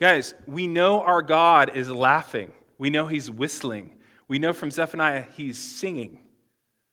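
Nothing in this speech recording points to a technical fault: the signal holds steady, with no audible breaks, distortion or level problems at any point.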